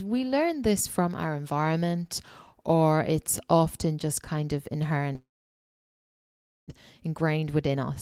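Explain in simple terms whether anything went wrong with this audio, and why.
Yes, two things went wrong. First, a long network dropout likely stopped audio arriving: after "often just kind of", from 5.15 to 6.72 s, the sound trails off briefly and then goes nearly silent for about 1.4 s. About one second of speech is lost for good, and the talk resumes half a second or so later than it should.

Then, from 7.08 to 7.91 s, a jitter buffer speed-up kicks in. The receiver had built up extra delay, so it trimmed tiny slices of sound, around 70 ms in all. The speech runs about 9% faster at the same pitch, sounding slightly rushed.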